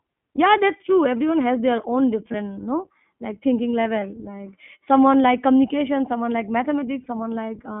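Throughout, the speech passes through the iLBC codec at a rate that fits its 15.2 kbps mode, band-limited to 200 Hz to 3.4 kHz, so it sounds plainly rough and synthetic.

At 0.36 to 0.39 s, just before "that's true everyone has", a single iLBC frame was lost and the decoder bridged it by repeating the last pitch cycle with noise. The result is a brief held, buzzy vowel before the speech snaps back. The same lost iLBC frames occur at 2.32 to 2.35 s, at 4.00 to 4.03 s after "no like thinking", and at 7.04 to 7.06 s after "like communication someone like". Each gap fits one 20 ms frame.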